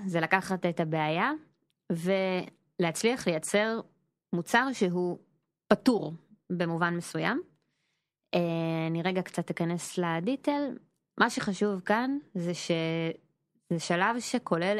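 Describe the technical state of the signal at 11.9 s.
At 11.9 s the speech signal is intact, with no audible fault at that moment.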